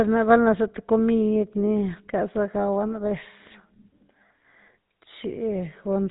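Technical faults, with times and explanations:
Throughout: GSM full-rate codec. The speech has a buzzy, gravelly roughness across the whole clip, and nothing above 4 kHz survives, so sibilants and breath sound dull and clipped off. The codec keeps a coarse model of the vocal tract and drives it with a sparse train of regular pulses, discarding two of every three excitation samples. That thin excitation produces the grainy buzz, a plainly audible level of damage that fits a 13 kbps stream.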